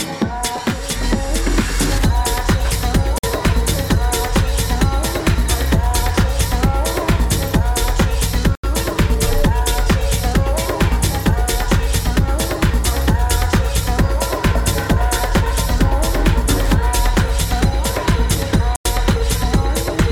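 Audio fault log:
3.18–3.24 s, 8.55–8.64 s and 18.76–18.85 s, Bluetooth stall: the wireless link likely fell behind, so the receiving end's buffer emptied before fresh packets arrived and playback simply halted until data came through again. Each stall is heard as a hard drop to silence, about 51 ms, 84 ms and 93 ms long, with the sound stopping abruptly and restarting just as suddenly rather than fading.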